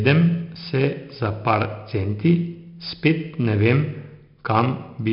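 Throughout the speech, 4-bit ADPCM compression leaves a gritty hiss riding on every loud syllable, with smeared attacks and nothing above 5.3 kHz. Unlike steady dither or tape noise, this hiss rises and falls with the level.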